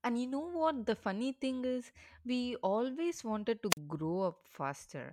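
At 3.7 s the radio link from a wireless microphone weakens enough for the receiver's squelch to shut the output, a wireless microphone squelch dropout: a short burst of hiss, then about 42 ms of near silence, with the speech back by 3.78 s.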